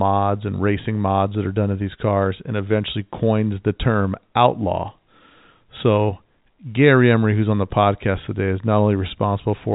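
No technical faults are audible in the speech, which carries the ordinary narrow band of G.711 mu-law telephone coding, with nothing above about 3.8 kHz and at most a faint trace of that format's level-following quantisation noise.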